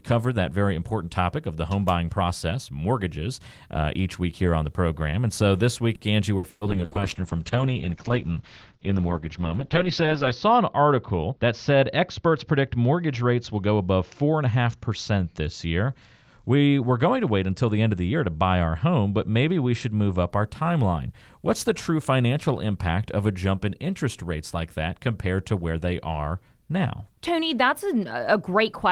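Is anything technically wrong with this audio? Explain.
Yes, there are three faults in this speech.

From 5.95 to 6.94 s there is repeated packet loss with a robotic sound. Four gaps, the longest 120 ms, are filled by extending the preceding audio, which conceals 30% of that span. The result is choppy, with pieces missing. A spectrogram shows smeared, frozen harmonic bands, and the waveform shows repeated looped patches.

A call bitrate drop runs from 6.71 to 20.36 s. The encoder falls from 32 to 8 kbps, holding its lowest rate for 3.68 s, and the audio bandwidth narrows from 20 kHz to 8 kHz. Speech becomes muffled and watery. On a spectrogram, everything above 8 kHz disappears at a sharp ceiling.

A jitter buffer speed-up occurs from 11.24 to 11.53 s. The receiver trims pitch-period-sized slices, around 50 ms in total, to drain excess buffered audio. Playback runs at 116% speed with unchanged pitch, so it sounds hurried. 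The waveform looks compressed in time, while spectrogram harmonics stay level.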